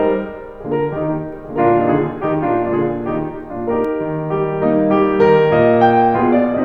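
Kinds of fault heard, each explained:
Doubled audio track: from 1.33 s to 3.85 s the music is heard twice, with a second full-band copy trailing about a second behind and a few decibels quieter, around 5 dB down. The copy carries no decay or room colour, so it reads as a separate, out-of-step layer. It cuts in and out abruptly at those times, which points to a likely cause of the same audio being captured again through a slower path.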